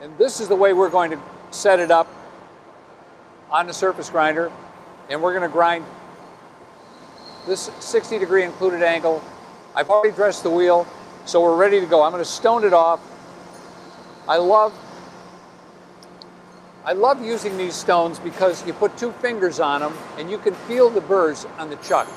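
At 9.87 to 9.91 s there is a short concealed packet loss. About 20 ms of audio never arrived in time. The receiver bridged it by extending the preceding sound for roughly 13 ms, then blended back. It is heard as a brief smear.

Then, from 9.95 to 10.05 s, comes a burst of packet loss. About 80 ms went missing in a row. The decoder stretched the last sound across roughly 81 ms, fading it as the gap lengthened. This gives a held, dying tail. Playback then resumes further on.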